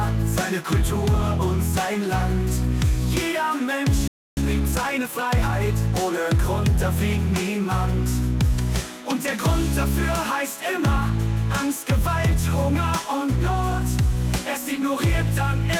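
At 4.08 s the sound cuts off mid-flow and stays silent for about 0.29 s, until 4.37 s: a playback stall, likely because the player ran out of buffered data or its thread was blocked. The waveform drops to a flat line and the spectrogram shows a clean vertical blank band.

From 4.37 s to 5.53 s comes time-compressed catch-up. The player works off its backlog by removing short slices and cross-fading the joins, so the sound runs 1.25 times faster at unchanged pitch, hurried. On a spectrogram the harmonics keep their frequencies but events crowd closer together.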